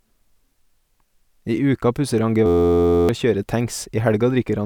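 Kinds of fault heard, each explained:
System hang loop: the playback system froze while the sound hardware kept replaying its last buffer, so from 2.46 to 3.09 s an 11.61 ms slice of speech repeats exactly, giving a steady buzz at about 86 Hz that fits a 512-sample buffer, with roughly 0.7 s of speech lost.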